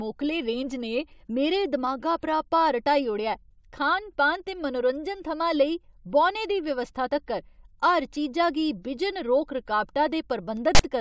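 At 10.75 to 10.81 s, near the end of the speech, file tags are played as audio: a text tag block is decoded as samples, giving a loud, hard-edged rasp. On the waveform it sits offset to one side, and its zero padding plays as silence.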